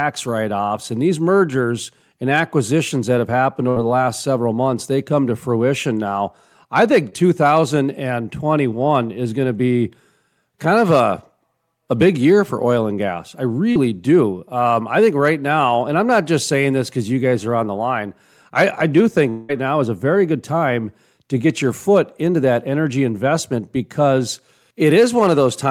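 Burst of packet loss at 3.69–3.78 s: about 60 ms never arrived, so the receiver continued the last sound and faded it before the speech resumed with that stretch missing.

Short concealed packet loss at 7.10–7.14 s, just after "to fruition now I", and at 13.72–13.77 s, after "oil and gas I": 20 ms and 40 ms holes were filled by extrapolating the previous sound, leaving brief smears.

Long network dropout at 19.29–19.51 s, right before "now is a very": this is likely a longer interruption, and about 200 ms was bridged entirely by a continued, decaying sound with no silence.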